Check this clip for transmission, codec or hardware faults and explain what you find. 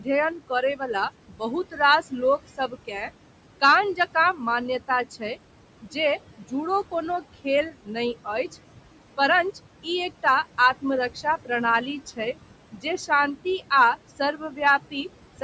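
Two related faults come from the call's noise suppressor; neither is a transmission or codec fault.

Noise suppressor artifacts run through the whole clip. The room noise sits about 15 dB below the speech, and the suppressor pulls it down by about 18 dB wherever it judges a band to be steady noise, updating frame by frame. The background therefore drops away in pauses and comes back under the speech.

Speech cut by the noise suppressor occurs in three stretches: 0.0 to 8.54 s, 10.82 to 11.5 s, and 12.06 to 15.42 s. In each one the suppressor mistook quiet speech energy, such as soft consonants and word tails, for noise and lowered it with the background. The dips reach about 17 dB in the first stretch, about 11 dB in the second and about 14 dB in the third. The affected fragments add up to roughly a second, a tenth of a second and under half a second, and they sound swallowed or faint. 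The band limit near 8 kHz comes from the normal call microphone processing.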